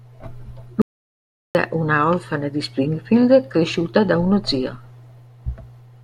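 At 0.82 s the speech cuts out abruptly. What follows is an audio dropout to silence lasting 0.73 s, until 1.55 s. The gap is silent, with no room tone or background left. Speech returns mid-flow with "una orfana di". Whatever was said during the gap is lost. The likely cause is a brief loss of the input signal, such as a dropped link or a momentary mute, while recording carried on writing silence.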